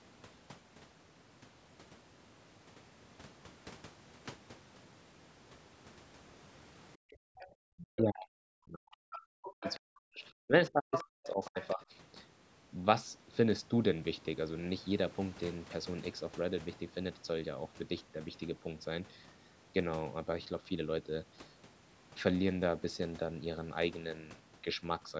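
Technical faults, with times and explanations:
7.13 to 11.81 s, speech suppressed in double talk: The speech dips, dulls or breaks up at 7.13 to 10.52 s, 10.7 to 11.58 s and 11.74 to 11.81 s. The first two runs fall by about 40 dB at their deepest. The last falls by about 15 dB. The first run is affected for roughly three seconds in total. The likely cause is an echo canceller that heard the far side on the loudspeaker and the local talker at once. It could not tell them apart, so it turned both down.
7.4 to 11.72 s, other side's voice leaking through: A second voice breaks through in five scraps. These fall at 7.4 to 7.47 s, 9.13 to 9.19 s, 9.46 to 9.79 s, 10.92 to 11.04 s and 11.24 to 11.72 s. They sit about 20, 15, 10, 5 and 20 dB below the speech. The loudest is at 10.92 s. They likely come from loudspeaker playback that the echo canceller failed to remove from the microphone. They overlap the suppressed stretches.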